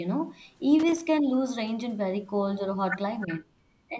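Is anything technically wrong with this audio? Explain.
Yes. This speech recording has three kinds of technical fault.

From 0.79 to 1.06 s there is loose connector crackle. A worn or dirty contact somewhere in the chain kept making and breaking as it shifted. That chopped the signal on and off, and any DC on the line turned each break into a small pop. The result is a short, irregular burst of scratchy crackle lasting about a quarter of a second.

From 3.23 to 3.34 s there is an echo leak. A faint, delayed copy of the voice comes through, trailing the original by about 0.33 s. It sits roughly 15 dB below the speech. This is likely the far end playing the call on a loudspeaker, with its echo canceller failing to remove everything its microphone picked up. The leftover was sent back as a brief ghostly repeat.

Speech is suppressed in double talk twice. From 3.24 to 3.53 s, about 200 ms of the voice is pulled down, dropping by as much as about 35 dB at its deepest. 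From 3.89 s to the end, about 100 ms dips again, by up to about 15 dB. The likely cause is both sides talking at once. The echo canceller could not tell the talker from the returning echo, so it turned everything down. The voice dips.

The call microphone processing is also audible, with nothing above 8 kHz. That is normal call filtering, not a fault.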